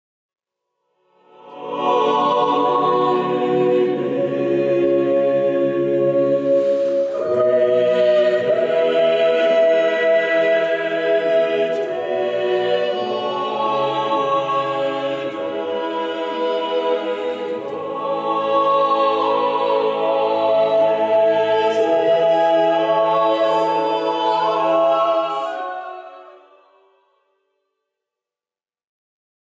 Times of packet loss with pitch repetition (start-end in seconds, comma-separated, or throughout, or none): none